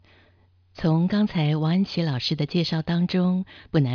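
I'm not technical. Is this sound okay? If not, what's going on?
Yes, it sounds fine.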